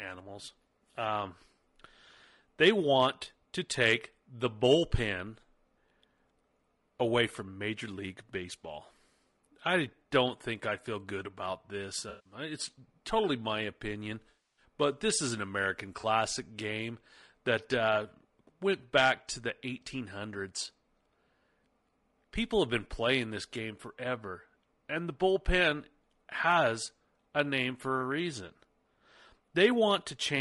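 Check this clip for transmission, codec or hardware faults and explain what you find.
The speech carries two faults: low-delay AAC compression across the whole clip, and AAC frame loss with concealment at three points.

Throughout, the voice sounds rough and grainy, with noise filling the gaps between harmonics and a thin, synthetic-sounding top band. This most likely comes from AAC-ELD, the low-delay AAC used in video calls, at a rate that fits about 32 kbps. Its short frames resolve pitch harmonics poorly. On a spectrogram the harmonic stripes look smeared and hazy, and the upper band is patchy and blocky.

AAC frame loss with concealment occurs three times. From 12.09 to 12.33 s (160 ms), between "feel good about this" and "it's totally my opinion", the sound turns into a smeared, noisy patch. The longest, from 14.29 to 14.64 s (280 ms), comes just before "but this is an". The shortest, from 15.99 to 16.05 s (40 ms), comes just before "game that uh went". 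In each case the decoder rebuilt the missing audio from the last good spectrum. On a spectrogram these stretches show frozen, washed-out texture with no clear harmonics, and on a waveform the envelope flattens oddly.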